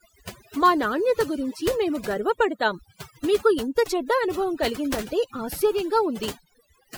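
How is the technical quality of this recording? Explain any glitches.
The recording suffers from overdone noise removal, present for the whole clip. A noise reduction stage was set far too aggressively on a noisy source, so any frequency band sitting close to its noise estimate gets pushed right down or switched off, and the softer components of the speech are caught along with the noise. The background drops and breaks up into twinkling, warbling specks.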